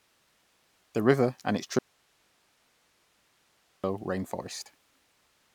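After "river and its", speech cuts abruptly to faint hiss from 1.79 to 3.84 s. This audio dropout to a faint residue, likely a lost input on a still-live path, shows as a flat sliver on the waveform.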